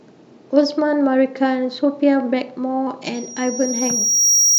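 From 3.14 s to the end at 4.58 s, a loudspeaker feedback squeal appears: the microphone picks up its own loudspeaker, and the loop gain at 5.7 kHz exceeds one. Unlike a steady interfering tone, it swells over roughly a second until it sits a few decibels above the speech.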